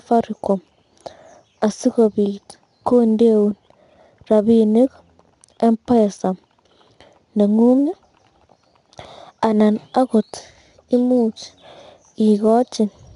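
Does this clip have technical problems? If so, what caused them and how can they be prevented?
Yes. 4-bit ADPCM compression runs throughout the speech. Each sample was coded as a coarse 4-bit step from a predicted value, so a gritty hiss rides on every loud syllable, rising and falling with the level, and sharp onsets distort where the adaptive step can't grow fast enough. Nothing is present above 10.6 kHz, which, together with the grit, points to a low sample rate near 22 kHz and a bitrate of roughly 89 kbps. Prevent it by storing the recording as uncompressed PCM or with a modern perceptual codec at an adequate sample rate.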